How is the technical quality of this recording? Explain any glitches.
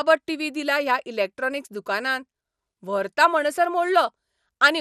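The speech sounds dull and gurgling throughout, with a granular, watery edge and highs that flicker in and out. That points to MP2 compression, likely at around 80 kbps, where starved upper sub-bands switch off and the surviving bands are coarsely quantised.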